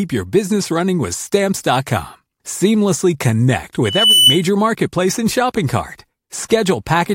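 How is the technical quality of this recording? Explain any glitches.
The recording has one clear glitch: a loudspeaker feedback squeal from 3.84 to 4.43 s. A microphone is picking up the loudspeaker it feeds, and at 3 kHz the loop gain tips past unity, so that tone reinforces itself on each pass. It swells over about a third of a second into a piercing whistle a few decibels louder than the speech. A spectrogram would show a bright horizontal line at 3 kHz thickening over that span, and the waveform's envelope would bulge outward.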